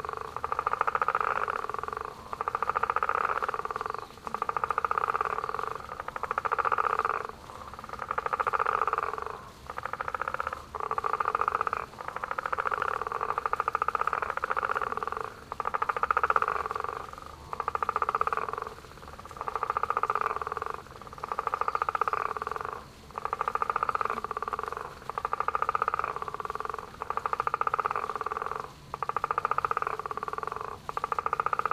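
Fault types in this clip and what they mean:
Dropped buffer (overrun): at 12.8, 20.27 and 24.53 s there's a small jump forward in the sound, no gap of silence, just a piece of roughly 40 ms missing. That's likely the capture side not reading a buffer before the hardware overwrote it.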